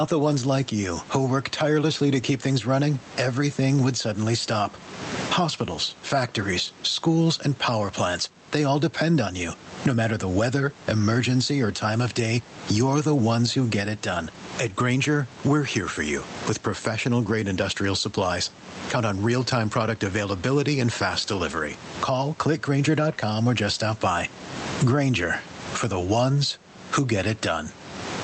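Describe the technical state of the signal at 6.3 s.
At 6.3 s you're hearing gain pumping, and it isn't local to that moment; it runs through the whole speech clip. The room noise, sitting about 31 dB under the speech, swells up in the gaps and then ducks hard each time the speech gets loud, a swing of around 20 dB. The likely cause is input gain set far too high with a fast limiter or compressor clamping down on every peak, so the dynamics come out squashed.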